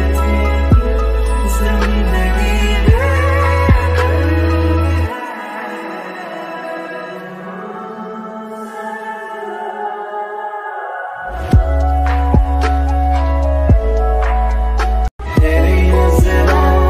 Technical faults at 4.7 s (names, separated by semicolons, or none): none